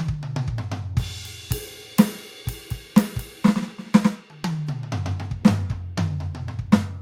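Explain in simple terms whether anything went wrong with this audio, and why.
Nothing went wrong here: the music comes through as it should, with no glitches or hiccups to point to anywhere along the way.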